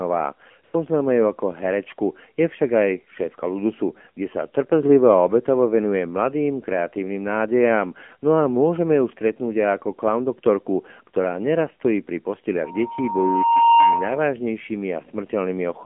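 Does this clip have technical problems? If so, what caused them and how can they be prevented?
Yes. The speech sounds buzzy, thin and synthetic throughout, confined to roughly 200 Hz to 3.4 kHz. This is the AMR narrowband mobile codec, which rebuilds the voice from a sparse vocal-tract model at a low bitrate, consistent with its 7.4 kbps mode. Routing the call over a wideband codec at a higher bitrate prevents it.

From 0.64 to 0.74 s, the real background drops out for about 100 ms and is replaced by a smooth, steady hiss. This is AMR comfort noise: the phone briefly judged the talker silent, stopped sending speech frames, and the receiver filled the gap with synthetic noise. Disabling discontinuous transmission, or tuning its voice detection less aggressively, prevents it.

From 12.64 to 14.35 s, a pure 929 Hz tone swells over about a second into a squeal standing roughly 5 dB above the speech. 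This is loudspeaker feedback squeal: the microphone picked up its own loudspeaker, and at that frequency the loop gain exceeded one. Lowering the gain, separating microphone and speaker, or using a feedback suppressor prevents it.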